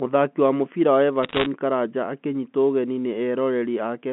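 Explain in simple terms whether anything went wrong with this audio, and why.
Bit errors on a digital phone line flipped roughly one bit in a hundred of the telephone signal from 1.23 to 1.46 s, just after "wa mũbira wa". Each flipped bit spoils a single sample, so the speech there picks up a burst of sharp ticking crackle.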